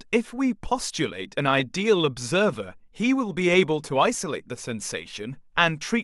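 Nothing in this recording trips a technical fault of any kind, so there's nothing here to flag.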